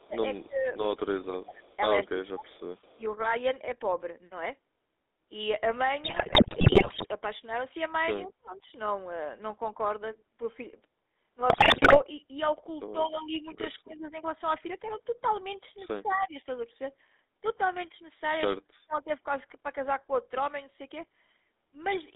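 The whole clip has that gravelly, buzzy GSM full-rate codec sound, which fits the old 13 kbps coder, with the band squeezed to roughly 250 Hz to 3.7 kHz. Its coarse pulse-driven excitation leaves the speech rough and boxy, with no top end.

From the start to 3.02 s the speech keeps dipping and chopping, down by about 20 dB at worst over a second and a half in total. That's likely speech suppressed in double talk: the echo canceller hears both sides at once and ducks everything. Inside that stretch, 1.62 to 2.99 s, there's a faint echo leak, a copy trailing 221 ms behind at about 30 dB down, likely from a loudspeaker's echo not being fully cancelled.

At 6.04 to 7.05 s come GSM bit errors. Corrupted filter and gain values hit the decoder, and the speech turns into squawks, pops and gargle for about a second. The same happens again, shorter, at 11.50 to 11.99 s.

The same double-talk ducking returns at 8.19 to 8.66 s, where it's deep, about 40 dB, so the speech nearly vanishes. 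It comes back at 13.07 to 14.17 s at about 20 dB and at 16.03 to 16.36 s at about 15 dB. At 16.11 to 16.15 s another brief echo leak slips through, again 221 ms late, around 40 dB down. A last dip comes at 18.54 to 19.10 s, roughly 30 dB deep.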